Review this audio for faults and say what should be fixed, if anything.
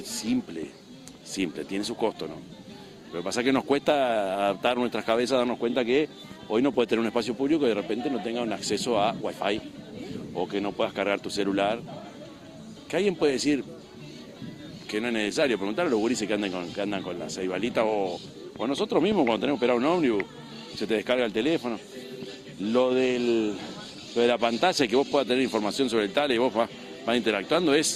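Nothing here needs fixing; no faults are audible.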